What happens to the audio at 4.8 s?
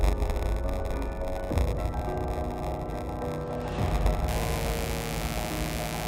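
At 4.8 s a steady, raspy mains buzz sits on the audio, fairly loud at roughly 10 dB below it. It starts at 4.28 s and runs to the end of the clip. Sharp switching spikes, as from a dimmer, a rectifier or a missing shield, enter twice per cycle of a 60 Hz supply. That builds a dense stack of 60 Hz harmonics reaching well into the kilohertz range, which gives the buzz its harsh edge rather than a smooth hum.

A second buzz at 93.8 Hz runs through this moment and the whole clip. The audio is also slightly slow, at 0.938 times normal speed, while keeping about its normal pitch. This is a block size mismatch (padded). One stage writes shorter blocks than the next stage reads, which fits 480-sample writes into 512-sample reads. The missing tail of every block is filled with zeros, so a tiny gap recurs at the block rate. The gaps stretch the timing and are heard as the buzz.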